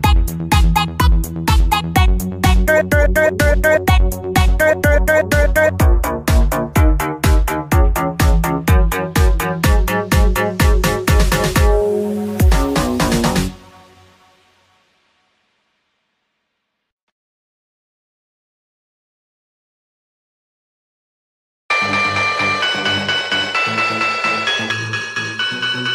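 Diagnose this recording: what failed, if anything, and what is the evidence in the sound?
From 24.71 s to the end, the sound goes hollow and phasey: classic channel delay (comb filtering). One channel arrives under a millisecond late before the mono sum, so shared content cancels in evenly spaced notches from around 700 Hz. That points to a driver or buffer offset.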